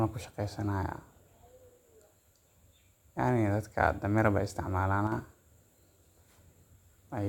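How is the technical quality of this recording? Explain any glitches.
One glitch stands out in this speech recording. From 5.07 to 5.12 s the level dips by about 6 dB, likely one channel dropping out briefly, halving the summed signal.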